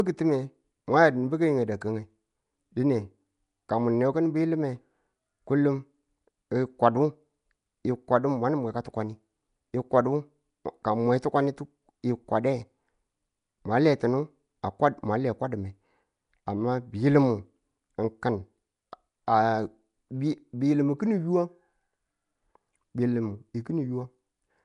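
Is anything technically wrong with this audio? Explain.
Yes. All through the speech there's a rough, hissy halo around the voice and a smeared, underwater quality, and nothing at all above about 10.6 kHz. That's most likely Nellymoser compression, Flash's old microphone codec. It squeezes each small block of audio into a fixed, tiny bit budget, so weaker bands get no bits and are filled with noise instead. The plainly audible damage fits a low bitrate of around 44 kbps.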